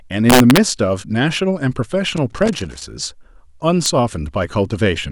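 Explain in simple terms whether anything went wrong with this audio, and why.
Two things went wrong in this speech clip. The first is integer overflow, at 0.30 to 0.57 s and again at 3.86 s. The level ran just past the biggest number the system could hold, and instead of stopping there it wrapped around to the opposite extreme. That's why those loud moments snap with harsh cracks, nastier than ordinary clipping.

The second is loose connector crackle, from 2.17 to 2.83 s. A worn or dirty contact kept making and breaking as it moved, so the sound got chopped up in rapid, uneven bursts. You hear that as scratchy crackling over the speech.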